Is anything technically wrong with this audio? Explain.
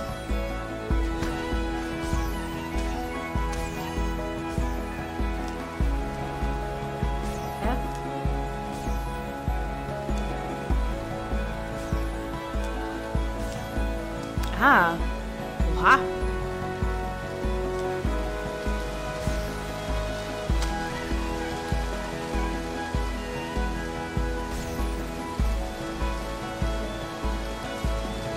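No, no technical faults detected.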